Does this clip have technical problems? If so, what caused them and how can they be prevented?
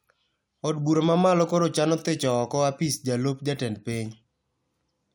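No, there are no technical problems to hear in this speech clip. There is nothing here that needs a cause traced or a prevention step.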